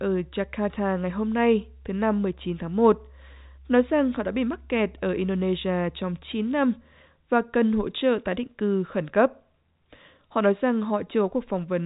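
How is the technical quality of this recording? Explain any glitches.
No glitches or faults heard.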